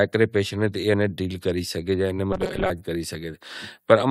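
From 2.33 to 2.70 s the speech gets a robotic sound, a rigid 188 Hz buzz, likely from repeated short buffers of about 5.3 ms.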